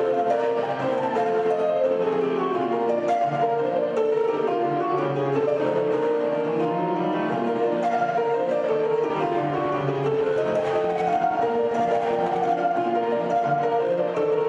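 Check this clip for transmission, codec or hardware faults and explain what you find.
A train of clicks runs from 9.10 to 12.44 s. Something, likely electrical interference or a faulty connection, injects a pulse 12.6 times per second at a regular pace, about forty near-identical clicks. They reach roughly the level of the sound itself, so a steady ticking sits on top of it.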